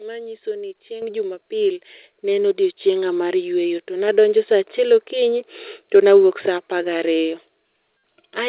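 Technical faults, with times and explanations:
1.02 s, 2.04 s and 4.08 s: microphone volume stepped up. Speech and background jump louder together, by about 8 dB, then about 4 dB before "ne en", then about 3 dB before "sa achiel okinyi to". Software judged the input too quiet and raised the device level instantly.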